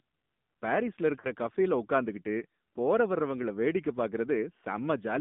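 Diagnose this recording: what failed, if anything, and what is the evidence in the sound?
Codec stage: AMR narrowband mobile codec throughout. The speech is confined to 150 Hz to 3.6 kHz and sounds plainly buzzy and synthetic, which fits a low rate near 7.4 kbps.

Network stage: lost AMR speech frames from 1.20 to 1.30 s. The decoder stretches the last good sound with fading gain, then recovers roughly, which fits about two lost frames.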